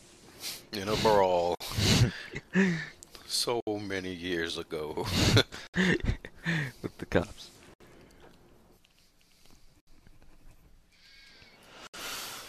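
Six short dropouts cut into otherwise continuous sound, at 1.55, 3.60, 5.67, 7.74, 9.80 and 11.87 s, about every 2 s. The first lasts about 53 ms and the rest about 67 ms each, with smeared edges, after which the sound resumes where it left off. This is a gap at a join of encoded pieces: separately encoded segments were butted together untrimmed, so each encoder's start-up silence and final-frame padding remain at every seam.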